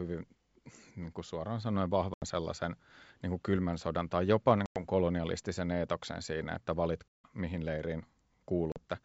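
Packet loss on an ADPCM call cuts hard-edged silent holes at 2.14, 4.66, 7.09 and 8.72 s, lasting 80, 100, 160 and 40 ms. The decoder's adaptive predictor and step size drift from the sender's, so speech resumes with brief, slight distortion.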